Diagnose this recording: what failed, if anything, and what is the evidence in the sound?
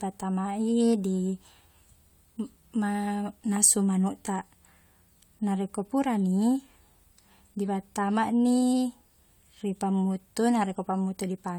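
Nothing failed: no fault is audible in this speech.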